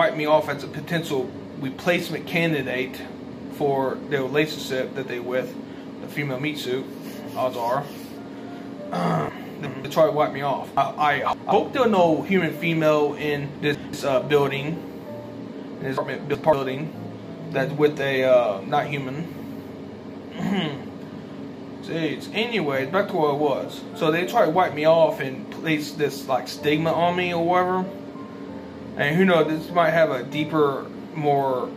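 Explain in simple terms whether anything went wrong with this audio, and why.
Chunks out of order: small pieces of audio, each about 0.19 s, arrived late and played in the wrong spot, so the sound jumbles at 9.29–9.85, 10.77–11.52, 13.56–13.93 and 15.98–16.53 s.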